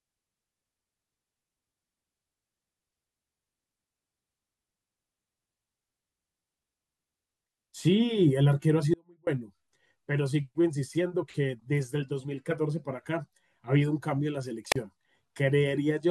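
Speech recording with two faults. From 8.94 to 9.27 s the voice drops out abruptly for about 0.33 s, leaving only a faint residue roughly 35 dB below normal level, likely a signal-path break with the downstream chain still live. At 14.71 to 14.76 s there is a wireless microphone squelch dropout, where the receiver mutes the output for about 35 ms as the radio signal fades.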